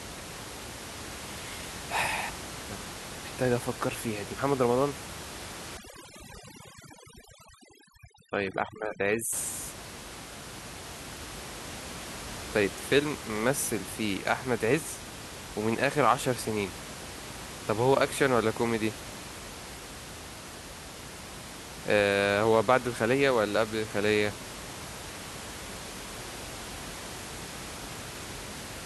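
It's a speech recording, and the problem sits between 5.77 and 9.33 s, where you get overdone noise removal. A noise reduction stage has been pushed far too hard there, so it's pulling individual frequency bands right down whenever they sit close to its idea of the noise floor. The room noise, about 13 dB under the speech elsewhere, drops and breaks up into little twinkling specks, and the quieter parts of the voice get stripped out along with it.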